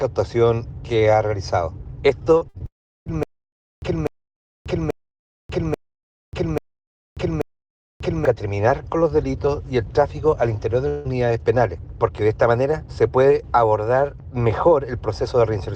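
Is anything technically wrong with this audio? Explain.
Yes, the audio has several network and playback faults.

Short concealed packet loss at 2.37 to 2.43 s and 2.58 to 2.62 s: about 40 ms and 20 ms never arrived, and the receiver's continuation of the last sound leaves brief smears.

A burst of packet loss from 2.49 to 2.56 s: about 60 ms of consecutive audio went missing. The filled-in continuation fades as a held buzz or hiss before the audio resumes further on.

Long network dropouts: the likely cause is incoming audio stopping entirely. From 2.66 to 3.08 s, about 0.4 s is lost. A fading continuation gives way to roughly 0.35 s of silence. From 10.88 to 11.07 s, about 160 ms is lost, bridged only by a fading fill.

Stutter with silent gaps from 3.23 to 8.25 s: the likely cause is a stalled player or stream replaying its last fragment at each retry. A 247 ms burst repeats six times, every 0.84 s, with about 0.59 s of digital silence between.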